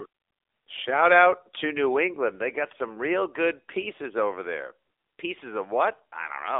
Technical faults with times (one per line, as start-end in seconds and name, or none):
0.00-6.59 AMR narrowband mobile codec